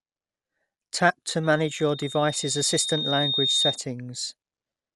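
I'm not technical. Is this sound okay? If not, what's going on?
No. The speech was most likely squeezed through Dolby Digital compression, a format that drops detail to save space. Everything above 11.5 kHz is gone, so the speech sounds dull and muffled, with a rough, fluttering grain throughout.

A loudspeaker feedback squeal also appears from 1.43 to 3.80 s: the microphone picked up its own loudspeaker and looped the sound back. A whistling tone near 3.7 kHz swells over about two seconds until it rises above the speech.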